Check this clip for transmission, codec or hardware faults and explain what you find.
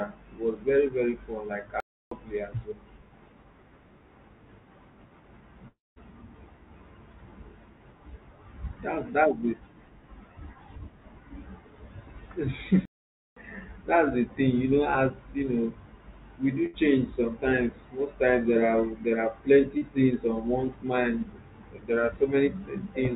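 Yes, there are faults. The speech passes through a narrowband call path that fits G.711 mu-law at 64 kbps, with nothing above 4 kHz. Over that, there are two stalls, one long dropout, one loss burst and one short concealed loss.

Playback stall, 1.80 to 2.11 s and 12.85 to 13.36 s. The speech stops mid-flow for about 0.31 s, just before "as well", and later for about 0.51 s. It then carries on. The likely cause is the player running dry or its thread blocking, so output went silent.

Long network dropout, 5.68 to 5.98 s. The last sound is stretched into a fading buzz or hiss. It then gives way to about 0.19 s of silence. Speech returns with roughly 0.28 s gone. This likely reflects audio that never arrived, with the receiver filling the hole.

Burst of packet loss, 16.66 to 16.75 s. It falls between "we do" and "sometimes most times there". About 80 ms of audio is missing. The receiver extends the last sound and turns it down, so a short fading buzz or hiss replaces the lost stretch before speech resumes.

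Short concealed packet loss, 19.77 to 19.83 s. It comes just before "things on one's mind". About 40 ms never reached the decoder in time. The receiver continues the previous sound and blends back in. The result is a brief smear rather than a gap.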